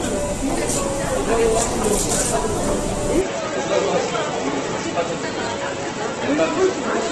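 From the start, the file was most likely made by re-encoding audio that had already passed through a very low-bitrate codec: low-bitrate audio saved at a high bitrate. The generous final MP3 encode cannot restore what the earlier stage discarded, so the sound carries a hard ceiling with nothing above 12.3 kHz, and the earlier codec's artefacts stay in place. The character points to an Opus encode at roughly a dozen kbit/s feeding a 192 kbit/s MP3.

At 3.21 s the system likely changes its input partway through, an input switched to a poorer device, and stays on it to the end. The replacement path passes a narrower band, cutting everything above 7.4 kHz, so the sound turns duller and boxier with no gap at the changeover. The level falls by around 5 dB, and a new bed of background noise appears roughly 40 dB beneath the signal.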